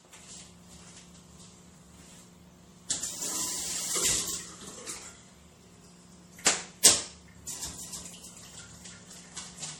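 Generation loss runs through the whole recording of everyday sounds. It has a swirly, hollow, smeared quality with softened attacks, beyond what one lossy pass would leave. This likely comes from several rounds of MP3 coding at about 64 kbit/s, perhaps four, each adding fresh quantisation noise and spectral gaps.

A doubled audio track starts abruptly at 7.66 s and lasts to the end. A second full-band copy about 5 dB quieter trails roughly 300 ms behind, with no decay or room colour, likely from a slower capture path mixed back in.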